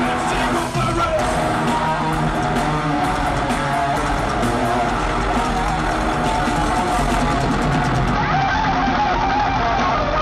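From 8.15 s to the end the treble dulls and a gritty grain rises: a Bluetooth SBC bit pool drop, which fits a fall from 28 to 8, around 72 kbps.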